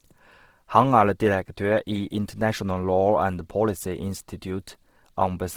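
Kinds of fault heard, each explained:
Opus compression: The speech sounds rough and grainy throughout, with a noisy texture replacing fine detail, though the top end keeps its full bandwidth. The likely cause is Opus coding in its music mode, filling starved bands with noise, which fits about 16 kbps.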